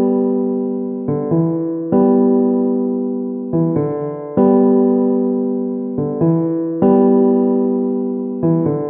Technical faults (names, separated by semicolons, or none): none